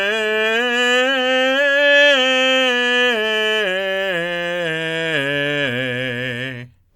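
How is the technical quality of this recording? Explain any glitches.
Nothing in the music stood out as a glitch or technical problem on listening.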